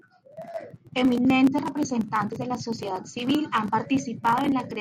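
From 0.21 to 4.80 s, clock slip clicks tick roughly five times a second, their steady spacing unlike random crackle, likely from two unsynchronised clocks drifting about 100 ppm apart.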